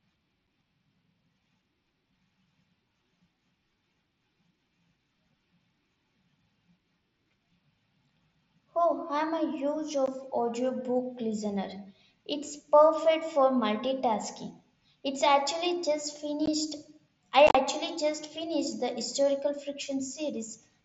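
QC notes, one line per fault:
0.47, 10.06, 16.46 and 17.47–17.55 s, unconcealed Bluetooth headset packet loss: on the mSBC wideband link, frames between headset and phone dropped out and were replaced by silence or an idle pattern. There are abrupt holes of about 7.5 ms at 0.47 s and 15 ms between "I'm a huge" and "audiobook listener" and after "actually just". A 75 ms stretch before "just finished the historical" is chopped, with gaps up to 37.5 ms. Unlike concealed loss, nothing is patched over, so the holes have hard edges.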